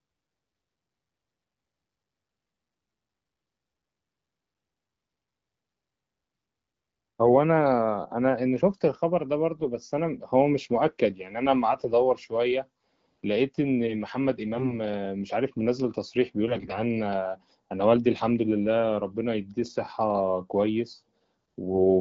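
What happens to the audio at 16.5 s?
From 16.48 to 16.79 s the speech suffers AMR bit errors. A few percent of the weakly protected bits in each coded frame arrive flipped, across what sounds like about fifteen 20 ms frames. Pitch and level hold, but the excitation and spectral detail go wrong, so the voice turns hoarse, scratchy and gargly. Frame loss would instead leave gaps or smeared repeats.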